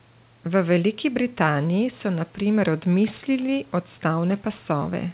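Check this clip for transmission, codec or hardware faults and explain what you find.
No transmission, codec or hardware faults.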